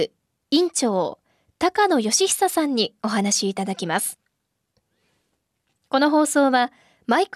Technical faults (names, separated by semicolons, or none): none